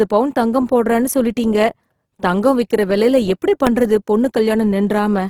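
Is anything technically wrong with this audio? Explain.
Yes, there are two faults. Throughout the speech there is Opus compression, likely at a low rate in the music (CELT) mode. Band energies are kept, but starved bands are refilled with folded or noise content, so the voice turns grainy and rough, plainly audible, while the band still reaches about 20.4 kHz. The rate heard fits roughly 16 kbps.

At 3.67 s, right after "தங்கம் விக்கிற விலைல எப்படி", there are invalid numbers at full scale. A calculation returned infinite or invalid values that were clamped to maximum amplitude for a block of about 0.67 ms. That is far too short to hear the start and end separately, so it comes across as a single sharp bang.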